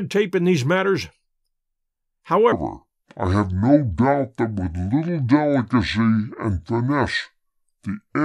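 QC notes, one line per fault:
2.52 s to the end, section at the wrong speed: from just before "may be" the speech runs at 0.65 times its proper rate, so everything slows and drops about seven semitones at once, turning deep and dragging. This is likely a playback or edit clock mismatch on that segment. Because pitch and tempo fall together, it differs from a pure pitch shift, which keeps the timing, and from a time-stretch, which slows the speech but keeps its pitch.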